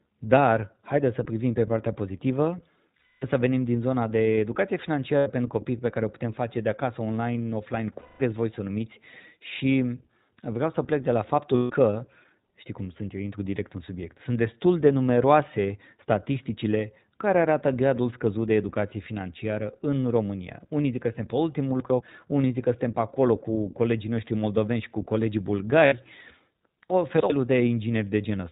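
Speech coded throughout with the iLBC codec, plainly audible as a band-limited sound with nothing above 4 kHz and a slightly rough, synthetic texture, which fits iLBC's 15.2 kbps mode with 20 ms frames coded independently of one another. Lost iLBC frames produce five gaps: 2.98–3.26 s (240 ms), 5.18–5.27 s (80 ms), 8.00–8.22 s (200 ms), 11.56–11.72 s (140 ms) and 25.86–25.95 s (60 ms). In each, the decoder fills the hole by repeating the last pitch cycle blended with noise, giving a held, buzzy vowel-like tone that fades over the longer gaps, and the sound recovers almost immediately afterwards. Chunks out of order occur at 21.8–22.0 s, where a 100 ms chunk plays one chunk late, and at 26.9–27.3 s, where a 100 ms chunk plays three chunks late. Nothing is missing, but the misplaced segments create a jumbled passage with hard joins.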